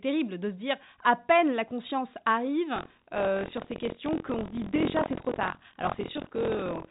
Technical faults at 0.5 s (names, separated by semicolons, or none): none